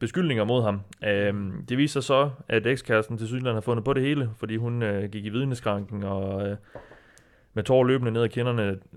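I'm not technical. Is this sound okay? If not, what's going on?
Yes, the speech sounds fine; nothing is wrong here.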